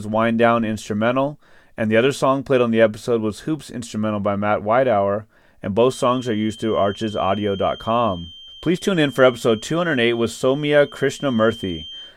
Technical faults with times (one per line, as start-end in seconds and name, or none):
5.79-12.17 feedback whistle